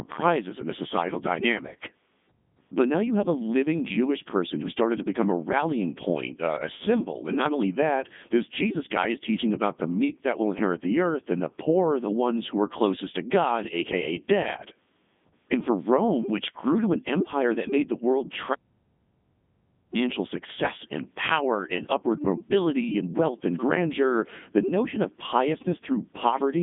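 Across the whole recording the speech has passed through a Codec 2 vocoder, with heavy damage that fits its 3.2 kbit/s mode. Only pitch, voicing, energy and spectral envelope survive, and sine-wave resynthesis makes voices robotic and buzzy. The band runs 150 Hz to 3.6 kHz, with nothing above 3.8 kHz.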